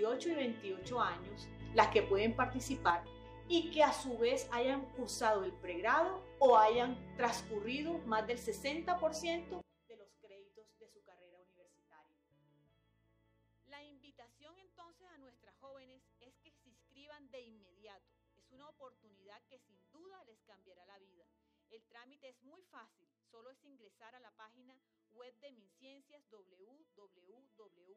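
The audio carries two sudden gain jumps. From 1.60 s to 2.90 s the level leaps up by about 6 dB, then falls back; from 9.61 s to the end it drops by about 24 dB and stays there. In both, the background noise shifts together with the sound, most likely a digital gain change applied between adjacent samples with no ramp. A waveform shows abrupt vertical steps in the envelope, and a spectrogram shows the whole band brightening or darkening at once.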